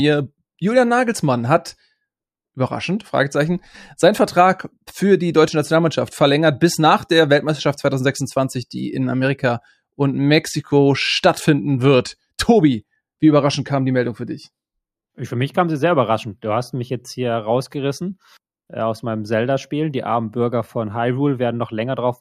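No technical faults can be heard anywhere in the recording.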